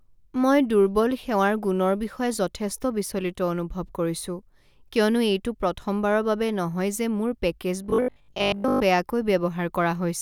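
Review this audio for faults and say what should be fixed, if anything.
From 7.84 to 8.84 s, just after "বাবে নহয় যে মোৰ", the speech collapses into robotic sound from repeated short buffers: a rigid metallic buzz near 50 Hz, likely from audio arriving too slowly so a roughly 20 ms block is replayed over most of that second. Unlike mains hum, the buzz appears only there and still loosely tracks the speech. Giving the playback path a larger jitter buffer or steadier delivery would prevent it.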